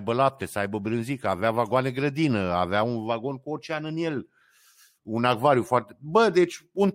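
No technical faults are audible anywhere in this speech recording. At no point does anything in the sound call for comment.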